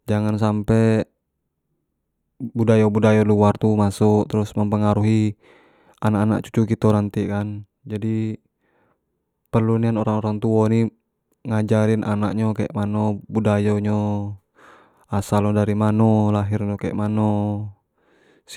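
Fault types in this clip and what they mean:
No technical faults can be heard in this speech recording. There is nothing to list for any part of it.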